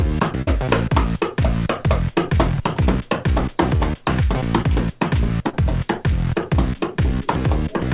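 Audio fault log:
0.42 to 0.49 s, burst of packet loss: A run of packets failed to arrive in time. The receiver stretched the last sound for about 46 ms and let it fade, so it holds and dies away. Playback then resumes about 40 ms further on, with that stretch missing.
2.55 to 2.59 s and 5.49 to 5.55 s, short concealed packet loss: Brief holes were patched by continuing the preceding sound, then blending back into the real signal. Each heard as a short smear or wobble through the narrow 4 kHz G.711 band. About 20 ms and 40 ms were lost.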